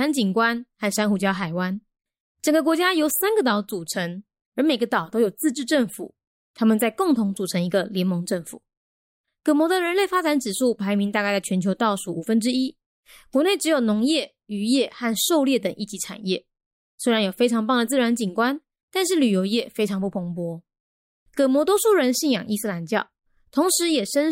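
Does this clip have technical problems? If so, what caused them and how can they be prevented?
No, no technical faults here.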